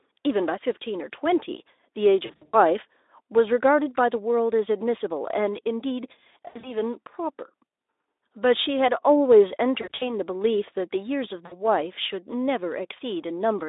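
Brief buzzy, smeared stretches that fade and leave the voice weak for a moment break into the speech at 2.25–2.57 s, 6.47–6.79 s, 9.81–10.14 s and 11.46–11.65 s. This is VoIP packet loss concealed by the speech codec: the Speex decoder extrapolates its last pitch and filter across missing stretches of up to 80 ms.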